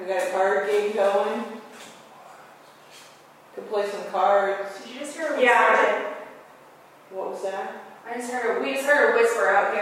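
No technical faults can be heard anywhere in the audio.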